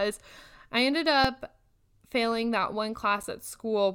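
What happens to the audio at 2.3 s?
At 2.32 s the output buffer runs dry for about 0.65 ms, an underrun with held sample: the converter freezes on its last value instead of dropping to zero, so the speech waveform flattens into a brief plateau. Because roughly under a millisecond of the live audio is lost rather than paused, the signal resumes at a different point than where it stopped.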